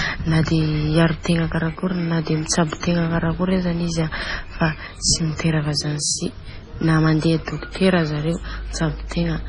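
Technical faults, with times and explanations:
Throughout, MP3 compression: the speech is cut off above 10.5 kHz and has a heavy watery, swirling quality. This is likely an MP3 encoder starved of bits, which fits a low bitrate near 24 kbps. The encoder drops the treble at a fixed frequency and discards weak frequency lines. Those lines flicker on and off between frames, so the spectrum never stays steady and the sound seems to bubble.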